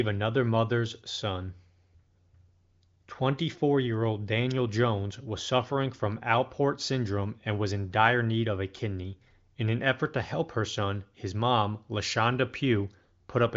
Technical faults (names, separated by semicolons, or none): none